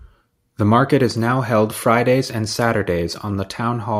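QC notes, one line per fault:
No faults found in this speech recording.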